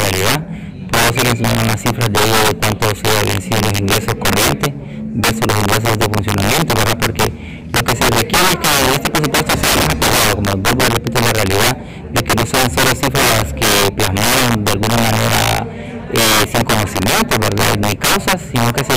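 Integer overflow runs throughout: pushed about 13 dB too hot, roughly one sample in fourteen wraps to the opposite sign, giving violent cracks, sudden sign-flipping waveform spikes and broadband vertical spectrogram streaks.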